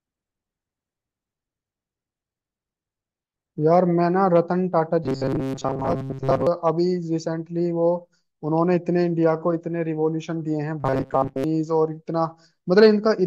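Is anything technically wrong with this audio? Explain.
Yes. Robotic sound from repeated short buffers occurs from 5.04 to 6.47 s and again from 10.80 to 11.44 s. New audio likely arrived too seldom, so a slice of about 7.5 ms was looped over most of the real signal. The result is a rigid, metallic 134 Hz buzz that only loosely follows the speech.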